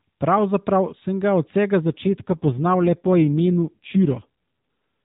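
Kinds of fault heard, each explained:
AMR rate drop: After "sem ga od vsega", from 1.82 to 4.26 s, the speech turns buzzier and more synthetic with no gap or change of bandwidth, as the codec spends fewer bits per frame. This fits a step from 12.2 kbps down to about 5.9 kbps.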